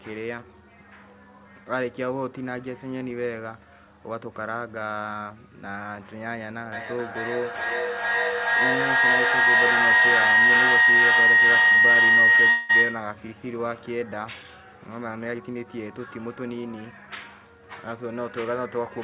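From 6.72 s to 13.29 s a feedback howl develops: two devices in the same room are on the call, so the loop from microphone to loudspeaker and back adds gain on every pass. Instead of dying away, the repeats build and narrow to a tone around 2 kHz that pulses roughly every 0.4 s. At its peak the howl is about 13 dB louder than the speech. It continues until the loop is broken at 13.29 s.

Between 12.50 s and 12.71 s, still under the howl, there is a call audio freeze. The likely cause is packets held up in transit, which left the receiver's jitter buffer empty. For 191 ms the receiver stretches the last sound into a fading buzz rather than dropping to silence. When the packets arrive, playback resumes exactly where it stopped. Nothing is lost, but the audio now runs 191 ms later than before.

From 15.31 s to 16.65 s comes a jitter buffer speed-up. The buffer has collected more audio than its target, so the receiver removes short slices of a pitch period or so, many times in a row, about 0.2 s in total. 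The speech plays at roughly 114% speed with its pitch unchanged and sounds hurried. Throughout the clip, the G.711 call path leaves nothing above 4 kHz.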